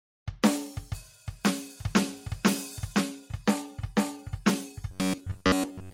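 From 4.91 s to 5.93 s the music turns into robotic sound from repeated short buffers, a rigid metallic buzz near 94 Hz. The likely cause is audio arriving too seldom, so a roughly 11 ms fragment is looped, replacing most of the real signal.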